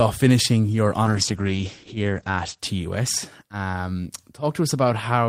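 A call bitrate drop hits this speech recording from 1.06 s to 2.65 s. The codec's bit budget collapses, and for about 1.5 s the audio loses its top end above 8 kHz and takes on a coarse, watery texture. That change points to the encoder being throttled from roughly 32 kbps to around 11 kbps after the call's bandwidth estimate fell. Detail returns once the bitrate recovers.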